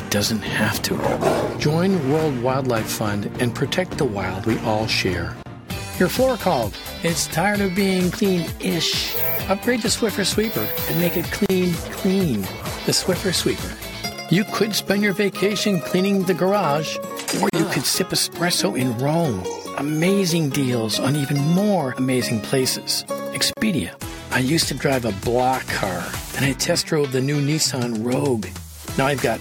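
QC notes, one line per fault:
5.43–5.46 s, 11.46–11.50 s, 17.50–17.53 s, 23.53–23.57 s: gap at a join of encoded pieces. Continuous sound drops to silence for about 32 ms at the first join and about 37 ms at the others, recurring every 6.0 s. This points to 6 s pieces encoded separately and butted together untrimmed. Each piece's encoder start-up delay and padded final frame remain as dead air. The edges are softened by the codec, and the sound resumes exactly where it stopped.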